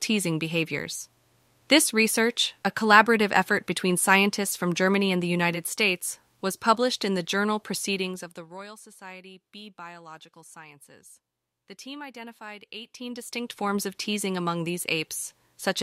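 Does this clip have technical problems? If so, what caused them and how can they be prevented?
Yes. A rapid ticking rides on the speech from 7.93 to 8.67 s while the level drops about 20 dB, and again from 12.73 to 13.77 s as it climbs back. This is zipper noise: the gain moved in unsmoothed 1 dB steps, each one clicking. Ramping gain changes smoothly per sample prevents it.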